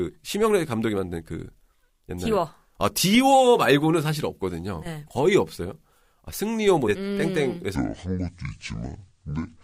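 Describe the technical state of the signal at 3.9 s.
At 3.9 s the speech signal is intact, with no audible technical fault at that moment.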